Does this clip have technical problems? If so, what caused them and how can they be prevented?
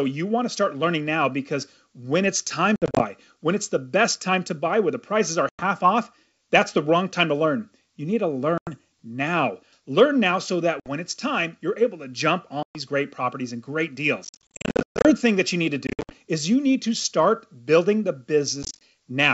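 Yes. Packet loss on an ADPCM call leaves hard-edged silent gaps at 2.76–3.04, 5.49–5.63, 8.58–8.72, 10.80–10.88, 12.63–12.78, 14.25–15.12 (about 570 ms lost, the most), 15.87–16.13 and 18.63–18.78 s. Afterwards the decoder's predictor and step size no longer match the sender's, so the speech returns distorted until they realign. A well-sized jitter buffer with loss concealment and decoder state resynchronisation, on a less lossy network path, would prevent it.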